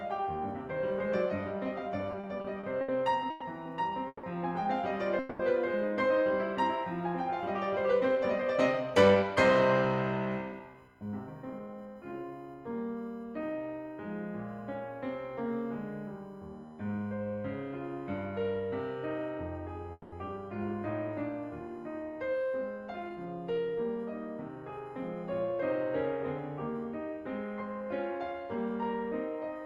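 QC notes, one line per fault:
Throughout: USB whine. A steady 1 kHz tone sits about 40 dB under the music, from USB bus current leaking in through power or ground at the 1 ms frame rate.
2.11–3.43 s: repeated stalls (stutter). The music drags and catches six times, the longest hold 110 ms, as the jitter buffer kept running dry and the receiver extended the last sound each time.
4.07–4.25 s, 5.19–5.41 s, 19.92–20.14 s: call audio freeze. The music hangs on a fading buzz for 160 to 200 ms, briefly dropping to silence in the first and last, then resumes where it stopped. The likely cause is packets held up in transit emptying the jitter buffer.
7.91–9.36 s, 10.52–12.32 s, 23.09–24.78 s, 28.18–28.70 s: jitter buffer speed-up. The tempo rushes at unchanged pitch, between 6 and 12 percent fast, as the receiver trimmed short pitch-period slices to drain an overfull buffer.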